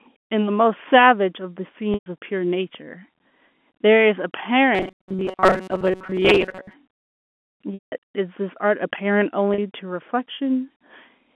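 At 1.94 to 2.06 s, packet loss with pitch repetition removes about 120 ms of audio, which fits six 20 ms packets. The receiver bridges the hole by repeating the last pitch period and fading it out, so the sound briefly holds on a buzzy tone before dying away.

From 4.75 to 6.74 s, the likely cause is that new audio reached the player too rarely, and it filled the gaps by looping the last few milliseconds, skipping most of the real signal. This robotic sound from repeated short buffers locks a rigid, metallic 188 Hz buzz onto the audio, which points to a loop about 5.3 ms long.

At 9.54 to 9.58 s, a second, shorter packet loss with pitch repetition drops about 40 ms, roughly two packets. The concealment covers it with a brief held, buzzy blip.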